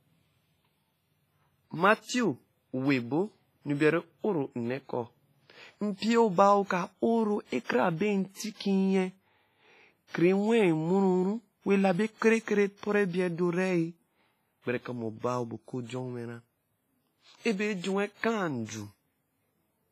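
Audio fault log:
throughout, WMA compression: heavy ringing, washy smearing and hiss that swells with the speech, nothing above 15.5 kHz; this points to about 24 kbps, likely WMA's long transform blocks, not short-block codec pre-echo.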